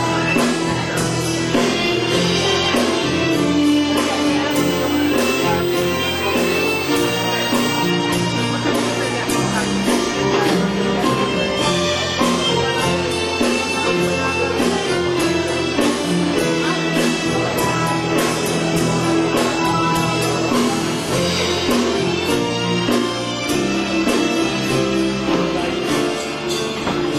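From 4.51 to 7.90 s there's a USB whine: a thin, fixed-pitch tone on 8 kHz, loudest at its 16 kHz harmonic and sitting roughly 15 dB under the sound. That's the bus's 125-microsecond microframe current bleeding in through power or ground.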